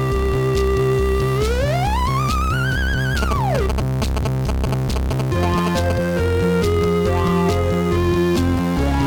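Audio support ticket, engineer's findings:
GSM signalling bursts, 3.22 to 5.92 s. Galloping ticks and short 217 Hz buzzes over the music, only slightly quieter than it. Nearby 2G handset signalling; its radio bursts are rectified by the audio circuit and reach the audio path.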